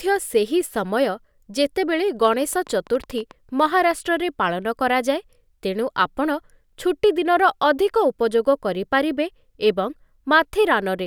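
A train of clicks runs from 2.25 s to 3.61 s: about fifteen sharp, near-identical pulses at an uneven pace, averaging around 12 per second. Something is injecting a brief impulse into the signal path over and over, likely electrical interference from nearby equipment or a faulty connection or power supply. The clicks peak at roughly the level of the speech itself, so they sound like a ragged ticking laid over the voice for just over a second.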